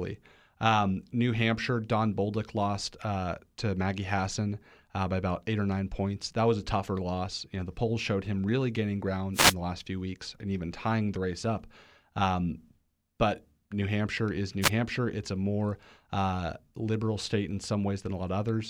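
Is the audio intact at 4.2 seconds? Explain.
Yes, the speech at 4.2 seconds plays through cleanly, with no dropout, click, distortion or other fault at that moment.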